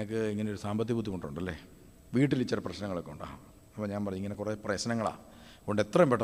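A brief tick at 4.34 s: a block of digital silence about 4.35 ms long, where the sound cut out abruptly, likely because the output buffer wasn't filled in time.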